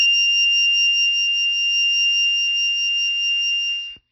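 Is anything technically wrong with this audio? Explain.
Yes. Throughout the music, likely MP3 compression at a very low bitrate, consistent with roughly 24 kbps: starved of bits, the encoder cut all treble above 5.8 kHz and dropped weak frequency lines frame by frame, leaving a dull, watery, swirling sound with smeared attacks.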